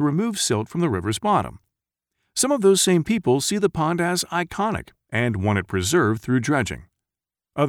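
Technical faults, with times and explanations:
No technical faults are heard in this clip.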